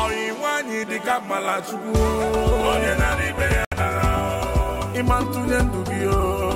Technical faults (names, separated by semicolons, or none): Bluetooth dropout